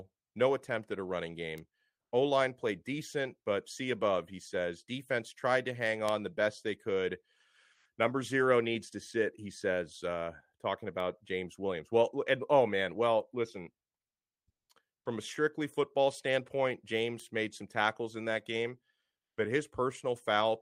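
A flipped bit in a single sample jumps the value by a power of two and snaps back, giving a bit error spike at 1.58 s, heard as a sharp, broadband tick unrelated to the speech. Another at 6.09 s, between "tried to hang" and "the best they could", spans a few consecutive samples. A third follows at 17.20 s.

At 7.75 to 7.83 s, after "the best they could", the sender likely stopped transmitting during the pause through Opus-style discontinuous transmission. The receiver filled 80 ms with comfort noise in place of the background, a featureless hiss about 7 dB quieter. From 14.07 to 14.67 s, between "oh man well listen" and "from a strictly football", the likely cause is the same. Here 600 ms of background gives way to flat synthetic noise, with the level dropping by about 22 dB.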